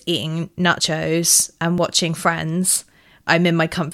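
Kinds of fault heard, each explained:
Audio missing between chunks: at 0.80, 1.78 and 2.76 s the speech skips forward, dropping roughly 20 ms each time with the two sides butted together. The regular spacing of about one second likely comes from a recorder losing a sliver while switching between one-second chunks.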